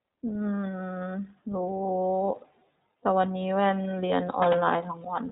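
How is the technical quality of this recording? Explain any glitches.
Quality is limited: the whole recording has passed through the iLBC codec, and the damage is plainly audible. From start to end, nothing above 3.8 kHz survives. Each 20 ms frame's excitation is coded independently, giving speech a rough, synthetic edge; the coarse detail fits roughly 15 kbps. A spectrogram shows a hard ceiling near 3.8 kHz with empty space above.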